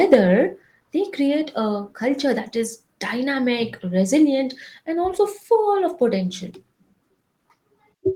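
Speech, with a harsh, crackling edge from 0.12 to 0.15 s where peaks are flattened, around a tenth of samples, about 5 dB over full scale. That is microphone overload, likely from input gain set too high, not codec distortion, which smears rather than crackles. At 0.14 s, voice and background drop together by about 3 dB in one step: microphone volume stepped down, likely automatic gain reacting to that clipped peak, unlike a fade or a speaker moving away.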